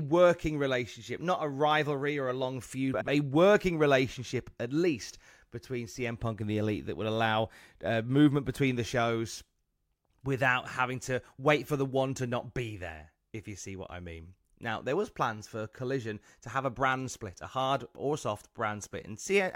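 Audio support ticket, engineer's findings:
Frames out of order, 2.94–3.09 s, speech. Garbled flutter where two neighbouring runs of about 70 ms swap places, which fits three-frame blocks. Likely a packet-reordering fault. No time lost; the clip keeps its length. Spectrogram: formant tracks break and resume out of sequence. Waveform: envelope discontinuities at the three seams.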